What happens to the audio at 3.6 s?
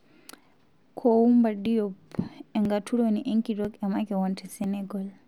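At 3.65 s there is a tiny skip: a few milliseconds of speech vanish and the audio on either side is butted straight together. This is audio missing between chunks, and the likely cause is a recorder or processor handling the sound in 1.0 s blocks and losing a sliver at the handover. Unlike a dropout, no silent gap is left, so it sounds like a jump in the sound rather than a brief hole.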